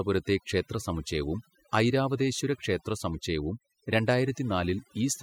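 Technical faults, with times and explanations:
Throughout: overdone noise removal. Aggressive denoising mutes bands near the noise estimate, taking quiet parts of the voice with them and leaving twinkling specks in near-silence, unlike plain low-pass dullness.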